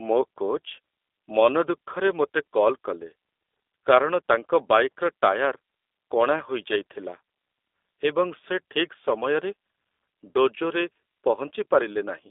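The speech has passed through a G.729 codec from start to finish. The coder discards the waveform and rebuilds each short frame from a vocal tract filter, a pitch predictor and a few pulses. That thin reconstruction fits an 8 kbit/s G.729A link. The line band runs roughly 300 Hz to 3.6 kHz, with nothing above 3.7 kHz, so sibilants sound dull and the voice is boxy. The codec damage is plainly audible as a rough, synthetic, slightly buzzy texture.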